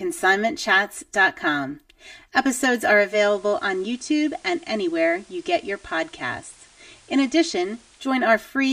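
Speech, with channel delay (comb filtering) throughout: one channel runs roughly 3 ms behind the other, and summing them to mono cancels common content at evenly spaced frequencies starting near 150 Hz, giving a hollow, phasey colour. At 2.97 s the signal shows digital radio blending to analogue. A 0.25 s crossfade moves to the FM broadcast, with level down about 3 dB, and hiss around 30 dB below the signal. It blends back to digital at 8.18 s.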